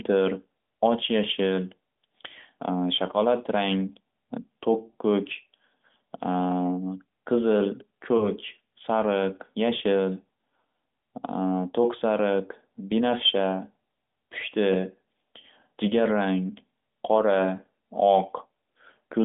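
Speech over a narrowband AMR mobile link, passing 200 Hz to 3.6 kHz, has two lost AMR speech frames, heard as a brief dip or warble at 8.18 to 8.29 s and at 17.56 to 17.60 s. Each fits a single corrupted 20 ms frame. The decoder concealed it by repeating the previous pitch and vocal tract parameters at reduced gain until good frames resumed.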